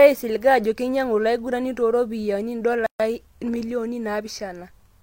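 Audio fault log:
2.86–3.00 s, gap at a join of encoded pieces: a 134 ms hole with softened edges, left by untrimmed encoder delay and last-frame padding between separately encoded pieces.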